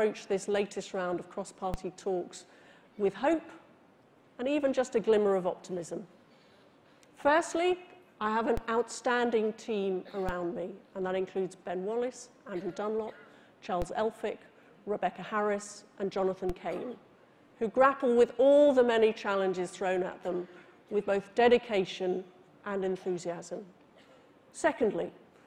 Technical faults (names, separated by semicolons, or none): DC step